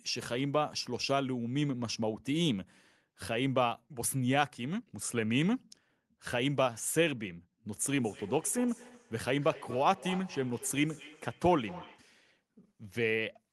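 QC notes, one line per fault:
7.89–12.18 s, feedback echo between two devices: the speech comes back at a steady interval of roughly 200 ms, peaking at about 16 dB below the direct sound. A second device in the room replays the call, and that microphone recaptures it outside its echo canceller's reach.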